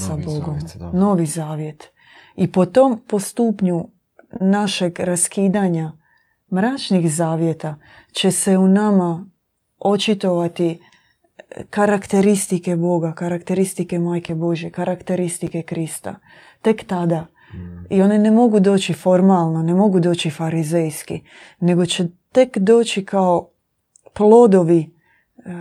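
No technical faults are audible anywhere in the recording.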